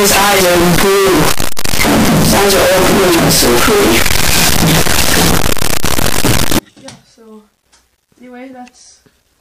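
From 0 to 6.59 s the audio is buried in full-range distortion with soft passages as loud as strong ones, the mark of signed and unsigned mixed up, likely in 8-bit samples. Unlike clipping, which flattens only the loudest moments, every zero crossing becomes a jump across the whole range.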